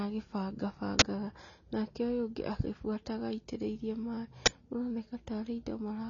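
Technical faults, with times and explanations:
throughout, AAC compression: speech likely coded as AAC-LC at a low bitrate, around 24 kbps, so nothing above 7.1 kHz remains and the speech sounds dull, smeared and warbly.
0.99 s and 4.46 s, uninitialised buffer: a block played before audio was written, so leftover memory became a 23 ms burst of digital noise, fitting a 1024-sample buffer.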